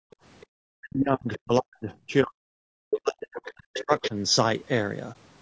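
The whole clip carries low-delay AAC compression, most likely AAC-ELD, and the damage is plainly audible: the speech sounds rough and grainy, with noise filling the gaps between harmonics. Too few bits are left to code the spectrum finely, and the coarseness fits a bitrate near 32 kbps. On a spectrogram the harmonic stripes look smeared, with speckled noise between them. The upper band looks patchy, and the call chain's band limit leaves nothing above 8 kHz.

From 0.00 to 0.23 s the background is gated by the echo canceller. While the loudspeaker was playing, the canceller clamped the microphone, so the room sound drops out for about a fifth of a second, falling by about 38 dB before recovering. The waveform shows a near-flat stretch at the start, and the spectrogram shows a dark gap where the noise floor should be.

The other side's voice leaks through in four short scraps. Each is likely echo from the talker's loudspeaker that the canceller failed to remove. 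The first, at 0.41–0.46 s, is barely audible, far below the speech. At 2.90–2.99 s the leak is nearly as loud as the talker. At 3.74–3.83 s it is clearly quieter, and at 4.03–4.09 s it is moderately below the speech. On a spectrogram these show as brief patches of a second harmonic pattern that does not follow the main speech.

Speech is suppressed in double talk from 0.74 to 2.59 s and again from 3.02 to 4.15 s. The likely cause is that both sides spoke at once and the canceller, unable to separate its own talker from the echo, turned everything down. The voice dips by as much as around 40 dB, losing presence and dropping out in pieces over roughly a second and a half, then about a second. The waveform shows a chopped, sagging envelope, and the spectrogram shows dark bands cutting through the harmonics.

At 5.12–5.17 s there is an AAC frame loss with muting. About 30 ms is missing, which fits a single lost frame whose spectrum the decoder zeroed. 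The overlapping windows fade the sound out and back in, leaving a brief dip. It appears as a narrow vertical gap in the spectrogram and a tapered dip in the waveform.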